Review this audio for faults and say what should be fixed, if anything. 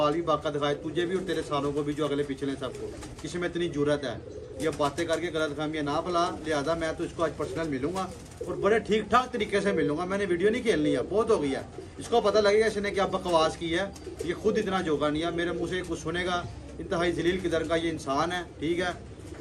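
Nothing here needs fixing, so it can be left as it is.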